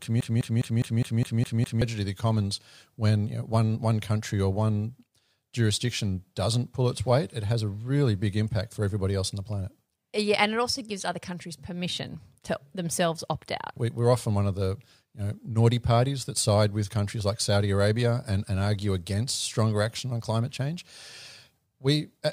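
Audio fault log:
0.00–1.82 s, broken-record loop: the clip opens with the loop already running, a fragment of about 205 ms repeating exactly and back to back, eight times, before normal speech resumes at "of the commons when". The identical repeats with no variation point to a stall where the player, encoder or stream likely kept resending the last fragment it held. Whatever speech belonged in this stretch is missing.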